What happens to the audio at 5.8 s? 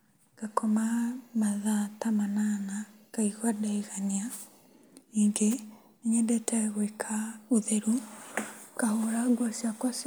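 Nothing goes wrong at 5.8 s; the audio carries straight through that moment with no dropout, click or other fault.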